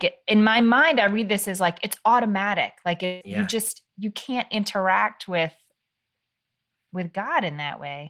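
A speech clip with one gap from 3.05 to 3.23 s, likely a long network dropout. For about 150 ms the last sound is stretched into a fading buzz rather than continuing, and when the speech resumes, roughly 160 ms of it is simply gone. That missing stretch is audio that never arrived and was never played back. No fully silent stretch opens up, because the smeared fill covers almost the whole gap.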